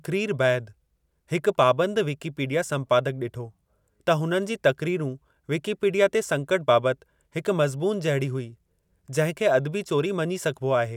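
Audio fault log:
No faults are audible anywhere in this speech recording.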